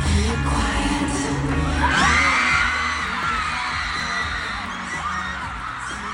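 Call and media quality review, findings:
CD scratch ticks, 3.08 to 4.15 s. Eight short ticks, roughly seven per second, longest about 3 ms. Source: disc playback. One scratch per revolution exceeds error correction. The player interpolates or mutes the damaged samples, leaving periodic clicks.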